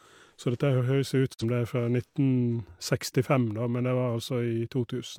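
Speech, with a digital broadcast dropout from 1.32 to 1.44 s: a quick 20 ms fade into a roughly 43 ms mute, which fits a single corrupted frame being dropped.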